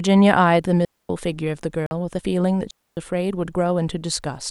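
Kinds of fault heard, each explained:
Digital wireless dropout: The speech falls into a clean hole of near silence twice, from 0.85 to 1.09 s (245 ms) and from 2.71 to 2.97 s (263 ms), with no crackle or noise burst at either edge. The radio link between transmitter and receiver lost too much data to decode, so the receiver muted its output behind a very short fade rather than pass on corrupted audio, then brought the sound back once reception recovered.
Bluetooth dropout: A shorter gap of 46 ms opens from 1.86 to 1.91 s, and the speech picks up afterwards as though it had kept playing through the silence, so a sliver of it is simply missing. This likely comes from audio packets failing to reach the headphones in time and being discarded, leaving the output silent until good packets arrived. The length fits roughly two lost packets.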